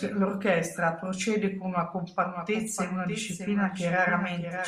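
From 2.21 s, just after "procede con una", to the end, a doubled audio track appears: a full-band copy trails around 0.7 s behind, roughly 10 dB quieter, likely from a second, slower capture path. Unlike room echo, it starts abruptly and has no decay or reverberant colour.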